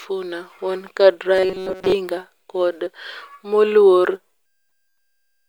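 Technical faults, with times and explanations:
1.35–1.93 s, robotic sound from repeated short buffers: audio likely arrived too seldom, so a few milliseconds were looped, forcing a metallic 188 Hz buzz over roughly two-thirds of the stretch.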